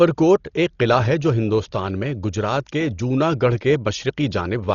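All the way through, this speech sounds dull and cut off above about 6.9 kHz, with rough, fluttering noise around tones: likely heavy Dolby Digital compression at a very low bitrate.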